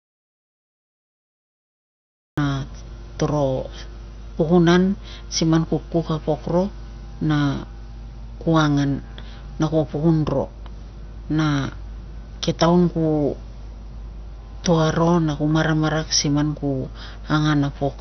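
From the first sample to 2.38 s the clip is in an audio dropout to silence that is already under way when it begins. The gap is silent, with no room tone or noise floor, and the speech then enters abruptly in mid-flow rather than starting cleanly. The likely cause is a lost input, such as a disconnected device, a failed link or a mute, while the recorder kept writing silence, so whatever was said during those first seconds is not recoverable.

Across the whole recording there is heavy MP2 compression damage. Nothing is present above 6.1 kHz, giving a dull, band-limited sound, and the remaining content has a gurgling, granular quality where the upper sub-bands switch in and out and what survives is coarsely quantised. This points to MPEG Layer II encoding at a low bitrate, something like 48 kbps, with the likely cause being too few bits to keep the high sub-bands active.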